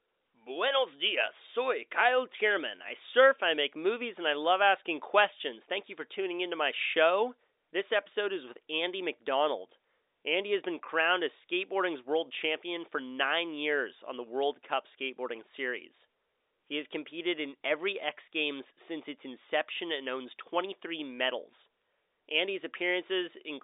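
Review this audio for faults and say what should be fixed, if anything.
Nothing stood out on listening to this telephone-band speech, so nothing here needs fixing.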